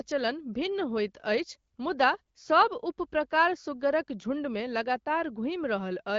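Speech, with no technical faults heard anywhere.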